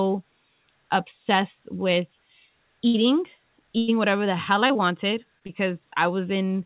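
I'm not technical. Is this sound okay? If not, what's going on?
No. It has two kinds of dropout. There are two bursts of packet loss, at 2.88 to 2.96 s and 3.78 to 3.90 s. Each time the sound is held briefly and fades, then skips ahead. About 60 ms is lost the first time and 100 ms the second.

Short concealed packet loss happens four times, at 4.68, 4.73, 5.39 and 5.47 s. Each gap is about 20 ms. It is patched over and heard as a tiny smear or wobble. The call line itself carries nothing above 4 kHz, so the sound is narrow, like a phone.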